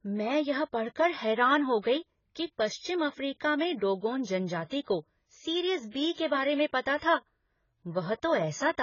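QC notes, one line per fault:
Throughout: AAC compression. The speech sounds dull and smeared, with a warbling, fizzy texture on sustained vowels and sibilants, and nothing reaches above 7 kHz. The likely cause is heavy AAC-LC coding at a bitrate that fits about 16 kbps, where the encoder lowers its cut-off and starves the upper bands of bits. On a spectrogram the energy stops at a hard ceiling near 7 kHz, with patchy holes and blotchy noise-filled regions below it.
4.81 to 4.87 s: pre-echo, just after "अफ्रीका में डोगोन जनजाति". A short hiss runs for about 56 ms ahead of a sharp onset, and the attack itself sounds softened and smeared. The transform spreads its quantisation noise across the whole block, so noise sized for the loud onset also fills the quiet moment before it. On the waveform a low, grainy smear precedes the transient. On a spectrogram a broadband haze appears just before the onset's vertical edge.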